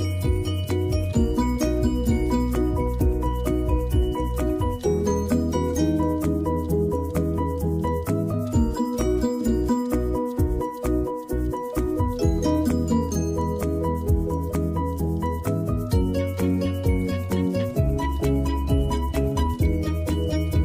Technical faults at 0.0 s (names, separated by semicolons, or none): none